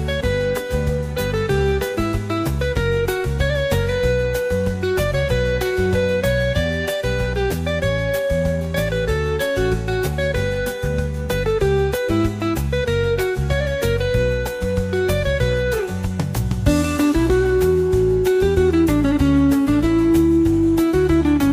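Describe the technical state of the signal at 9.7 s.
At 9.7 s the signal is intact, with no audible technical fault at that point.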